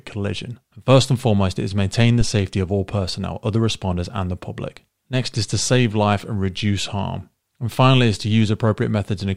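At 2.21 to 2.36 s, after "foremost it is maintain", a phantom power thump: a supply switching step hits the coupling capacitors. It shows as one large low-frequency waveform swing, about -9 dBFS, decaying within 35 ms.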